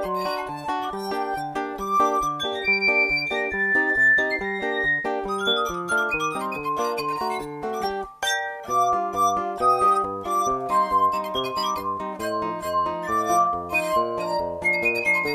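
No technical faults are audible.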